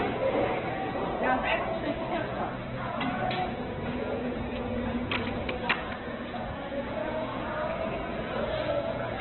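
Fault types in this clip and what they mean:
Opus compression: the audio was likely run through Opus at a very low bitrate, pointing to around 8 kbps, so its music mode fills starved bands with folded or noise content. Throughout, tones sound grainy and rough, and nothing survives above 4.2 kHz.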